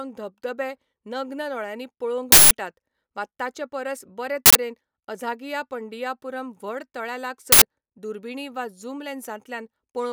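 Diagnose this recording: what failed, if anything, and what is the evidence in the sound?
Uninitialised buffer bursts at 2.32–2.51 s, 4.46–4.55 s and 7.52–7.62 s: loud digital noise over the speech. A driver or buffer stage played blocks before audio was written to them, outputting stale memory. The 186 ms and 93 ms lengths fit 8192- and 4096-sample buffers.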